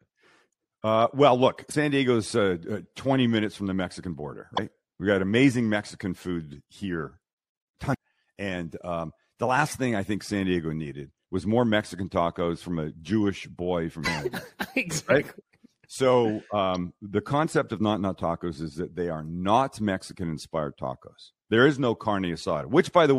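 Speech carrying four brief blips, each roughly 50 ms long: at 1.69 s just after "well look", at 4.53 s, at 7.90 s, and at 14.02 s just after "boy from". These are damaged data in a compressed stream. Corrupted or missing bytes make the decoder misread those frames and lose sync until it finds the next valid frame header, so each glitch cuts briefly into the speech.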